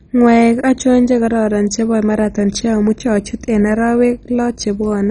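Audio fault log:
throughout MP2 compression: speech dull, nothing above 10.4 kHz, with gurgling, granular roughness as sub-bands flicker off, unlike a clean low-pass; likely heavily starved MP2, fitting 32 kbps.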